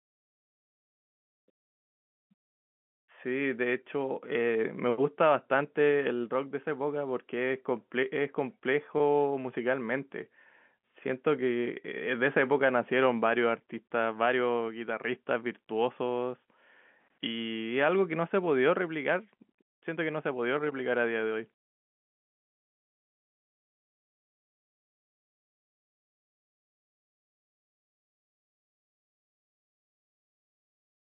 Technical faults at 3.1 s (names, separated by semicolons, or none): none